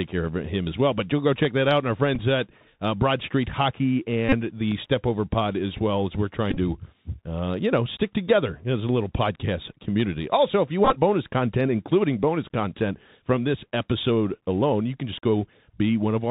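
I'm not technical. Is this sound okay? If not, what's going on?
No, not quite. There are three kinds of trouble in this recording.

The whole clip has gone through a Bluetooth CVSD headset codec, the basic format headsets use for calls. It squeezes the sound into a narrow band, so nothing above about 4 kHz survives. The speech sounds muffled and phone-like, s sounds come out scratchy, and you can hear a fine grainy hiss under everything.

There are two short blocks of digital silence, where the audio drops to nothing and snaps straight back. The first, at 1.45 s, lasts under a millisecond and just ticks. The second, at 4.72 s, is about 3 ms long and also gives a click. This points to the playback side not delivering audio in time.

There is also the Bluetooth headset packet repeated problem. The wireless link drops bits of audio, and the headset fills each gap by replaying the last chunk it got. 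That makes a brief buzzy stutter at 2.15 to 2.19 s, just before "at uh", and at 4.29 to 4.34 s. It happens again at 6.51 to 6.57 s, between "as well as we're" and "to uh you know". The longest and roughest one is at 10.85 to 10.97 s, between "if you" and "bonus content including bonus".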